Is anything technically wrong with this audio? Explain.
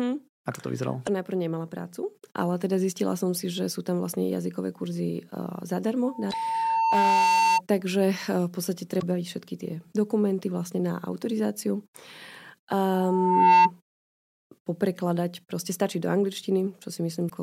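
Yes, there are two problems in this speech clip.

Damaged data in a compressed stream occurs at 1.03–1.09 s, 6.28–6.34 s, 8.98–9.03 s (just after "v podstate") and 17.26–17.31 s. Corrupted bytes make the decoder misread frames and hunt for the next header, so each spot becomes a brief chirp or blip of about 55 ms.

Loudspeaker feedback squeal appears from 6.04 to 7.61 s and from 12.92 to 13.71 s. The microphone is picking up its own loudspeaker, and at 902 Hz the loop gain exceeds one. That tone swells into a whistle. The first squeal takes around two seconds to reach about 5 dB above the speech. The second rises in under a second to about 10 dB above it.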